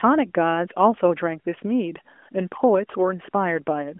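No technical faults can be heard in the speech; it arrives by way of an AMR narrowband mobile codec, with the telephone band running from about 250 Hz to 3.4 kHz, nothing above 3.5 kHz, and the light coding texture that fits the 12.2 kbps mode.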